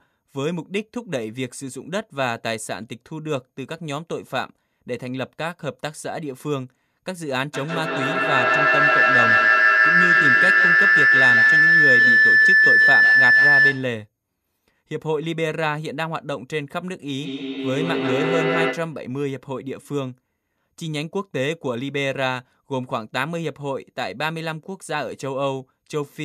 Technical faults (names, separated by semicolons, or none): feedback howl; feedback echo between two devices